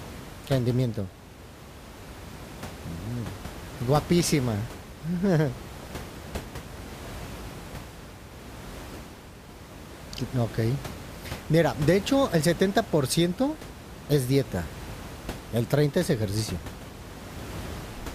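No technical faults occur at any point in this speech recording, and the room noise sits about 15 dB below the voice.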